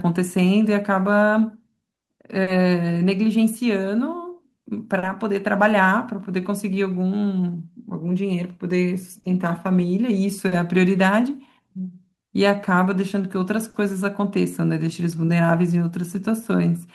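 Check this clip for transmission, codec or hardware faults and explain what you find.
Three related timing faults are present in this speech.

Clock drift between sender and receiver runs through the whole clip. The sending clock runs roughly 3 percent slow against the receiver's. The jitter buffer therefore keeps draining. The receiver has to stretch or repeat material to keep playing. The result is small, uneven timing hiccups across the recording rather than one clear event.

Repeated timing corrections occupy two stretches, 0.97 to 8.81 s and 11.61 to 16.79 s. In both, playback runs at 98 percent speed. Short pieces are repeated to cover the slow sender, each stretch gaining roughly 150 ms in total. The edits all go the same way but are spaced unevenly. They come across as a slightly dragging, unsteady tempo with faint hitches.

Short stalls from a late packet occur at 2.43, 4.99, 9.20, 10.48 and 13.70 s. 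Each time a packet had not arrived when due, and the buffer ran empty. The receiver held the last sound for 40 ms, then resumed from the same point. Nothing is lost. Each stall is a brief held sound with a slight buzz or dip, and it adds 40 ms of delay.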